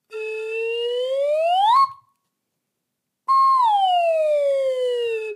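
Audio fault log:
No faults heard anywhere in this sound recording.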